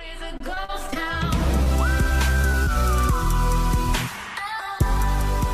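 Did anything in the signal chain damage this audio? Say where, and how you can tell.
Yes. The network stage lost packets repeatedly between 0.37 and 0.97 s, causing repeated packet loss with a robotic sound. Five gaps open in that span, the longest about 41 ms, and together about 80 ms of audio is gone. The receiver bridged each hole by extending the last sound, so roughly a fifth of the stretch is concealment. Because the holes come so close together, the sound turns choppy, with pieces missing.

At 1.63 to 1.68 s a late packet causes a short stall. The jitter buffer ran dry when the packet was due, and the receiver held the last sound for about 30 ms until it arrived, then resumed from the same point. Nothing is lost, but the sound hangs slightly too long with a faint buzz or dip, and the playout delay grows by about 30 ms.

Three short concealed packet losses follow, at 2.42, 2.51 and 2.63 s. 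Each drops about 20 ms that never reached the decoder in time, and the receiver filled the gaps with extrapolated sound of 17, 18 and 31 ms before blending back. The effect is a quick smear or wobble at each point, and the first one shifts the timing slightly.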